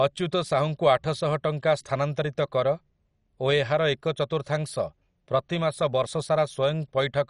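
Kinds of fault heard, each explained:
MP2 compression: the speech is dull, gurgly and granular all the way through, with nothing above 11.3 kHz, which is what happens when MPEG Layer II starves its upper sub-bands of bits. Likely an MP2 encode, and the obvious damage fits a low rate around 48 kbps.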